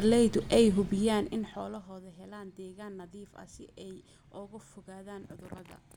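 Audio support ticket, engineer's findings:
Engineer's findings: no faults found in this speech clip.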